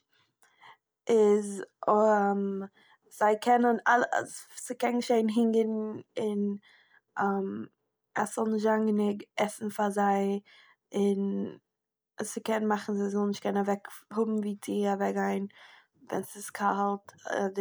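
No technical faults are audible anywhere in this recording.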